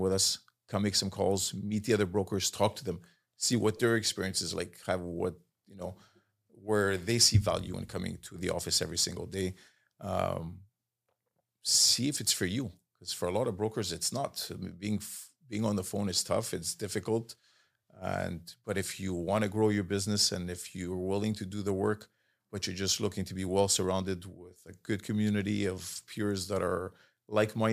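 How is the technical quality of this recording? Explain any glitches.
One glitch stands out in the speech: a brief noisy smear from 3.77 to 3.80 s, between "to them see what" and "their experience is like". It comes from lost LE Audio frames. The LC3 decoder filled the roughly 22.5 ms gap, which fits three 7.5 ms frames, by replaying the last spectrum with scrambled signs. Light LC3 coding at 64 kbps is likely also at work across the clip.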